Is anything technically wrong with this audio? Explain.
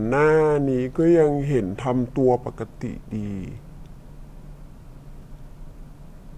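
Yes. Throughout the clip there is a wrong sample rate fault: the speech runs at about 0.73 times normal speed and sits roughly 5.5 semitones low, which fits 44.1 kHz material played back at 32 kHz without conversion. The voice sounds deep, slow and drawn out.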